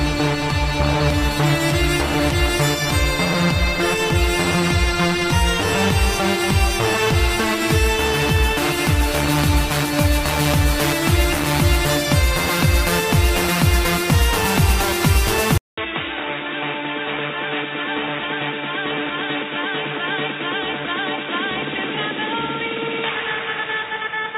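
The audio has one fault, starting at 15.58 s and lasting to the end. There the sound drops out for 200 ms, then returns dull and boxy. Nothing above 3.8 kHz survives, the level falls by roughly 5 dB, and a new, faint background noise appears well below the signal. This is most likely an input switched to a poorer device, such as another microphone or a headset's call profile, with its narrower band and its own noise.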